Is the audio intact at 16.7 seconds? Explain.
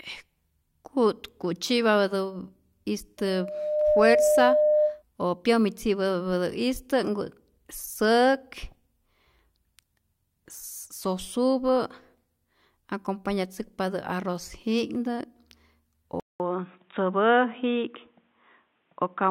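No. From about 16.2 s to the end at 19.3 s, the input appears to have switched to a poorer device. There's a gap of about 200 ms at 16.2 s, then the speech comes back dull and boxy, with nothing above about 3.8 kHz, a level shift of a few dB, and a faint new background noise well below the speech. That's likely the recording jumping to another microphone or a headset's narrowband call profile, so at 16.7 s you're hearing that lesser input.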